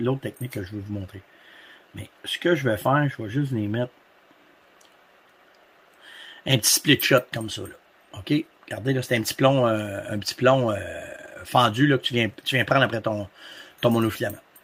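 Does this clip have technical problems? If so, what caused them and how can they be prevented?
No, nothing in this clip points to a technical problem, so there is no cause to trace and nothing to prevent.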